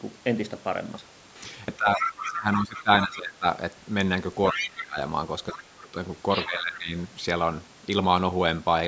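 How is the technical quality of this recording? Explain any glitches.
The recording is compromised in three overlapping stretches, where two call-audio faults occur together.

Speech suppressed in double talk occurs from 1.77 to 3.45 s, 4.53 to 4.97 s and 5.53 to 6.93 s. The speech dips sharply, by around 20 to 25 dB, and drops out in pieces. Both sides were likely talking at once, and the echo canceller turned everything down.

The other side's voice leaks through from 1.95 to 3.16 s, 4.5 to 4.83 s, 5.49 to 5.63 s and 6.3 to 6.79 s. A second voice sits behind the talker, sometimes only slightly quieter. The echo canceller likely failed to remove the loudspeaker sound from the microphone.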